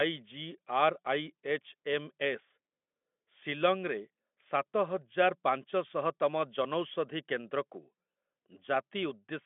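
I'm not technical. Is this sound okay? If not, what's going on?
Yes, nothing here needs fixing.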